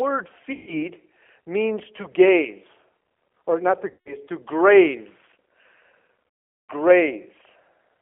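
Throughout, the speech passes through a G.729 codec whose low-rate model of the voice points to an 8 kbit/s coder. It confines the sound to a 300 Hz to 3.4 kHz telephone band and leaves a plainly audible rough, synthetic edge.

At 0.53 to 0.76 s, 3.90 to 4.15 s and 6.52 to 6.72 s, VoIP packet loss concealed by the speech codec occurs. About 140 ms, 160 ms and 400 ms of audio were lost, so the decoder extrapolated from its last pitch and filter state. This smears the speech into a buzzy tone or coloured noise that fades.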